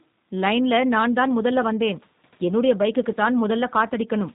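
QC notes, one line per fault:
throughout, G.729 codec: plainly audible damage, with nothing above 4 kHz and a rough, synthetic edge, because each 10 ms frame is rebuilt from a vocal tract filter, a pitch predictor and a few sparse pulses, which fits an 8 kbit/s G.729A stream.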